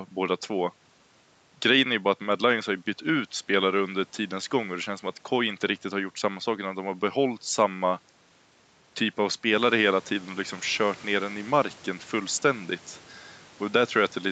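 Listening to this speech recording, nothing stood out as a technical problem.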